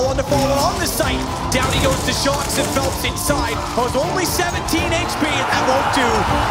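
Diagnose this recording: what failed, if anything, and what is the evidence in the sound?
Nothing in this recording points to a failure at any stage of the chain. No event in the sound calls for a diagnosis, so there is no evidence to report and no mechanism to explain.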